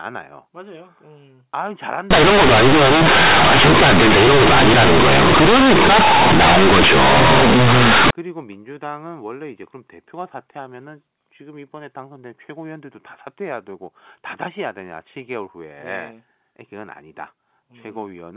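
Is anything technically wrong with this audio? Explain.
Yes. From 2.11 to 8.11 s the speech turns into very loud, harsh buzzing distortion, with heavy noise filling the pauses. This is companded audio read as linear: A-law bytes are being played as plain linear 8-bit samples without expansion, so every sign change throws the waveform across half its range and quiet passages blow up as loud as peaks. The surrounding telephone-band G.711 coding still cuts everything above 4 kHz.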